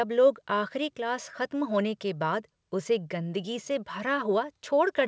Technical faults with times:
none

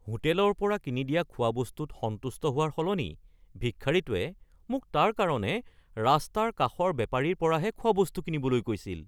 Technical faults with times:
none

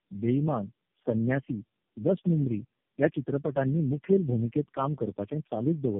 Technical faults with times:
0.00-5.99 tandem speech coding

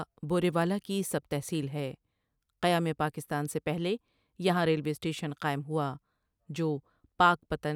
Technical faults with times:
none

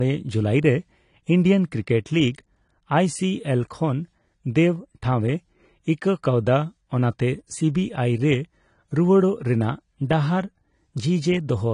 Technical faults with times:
0.00-11.74 low-bitrate audio saved at a high bitrate

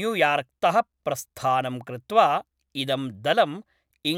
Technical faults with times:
none

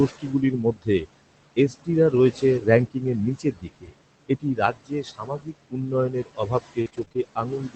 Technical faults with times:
0.00-7.75 noise suppressor artifacts
0.09-1.07 speech cut by the noise suppressor
1.56-3.02 speech cut by the noise suppressor
2.15-2.17 lost packet rebuilt from error correction
3.38-3.94 speech cut by the noise suppressor
4.28-7.75 speech cut by the noise suppressor
6.81-7.19 repeated packet loss (robotic sound)

